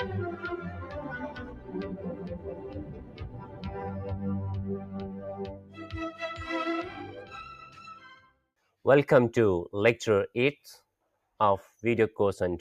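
A noise suppressor applied to music or sounds runs throughout, mistaking sustained tones and tails for noise, so the level pumps by roughly 15 dB and decays shrink on the waveform. Sound cut by the noise suppressor appears as darkened spectrogram patches at 1.31–1.74 s, 2.36–3.67 s, 4.8–5.24 s, 5.41–5.79 s and 8.27–8.74 s, each sinking about 7 to 10 dB.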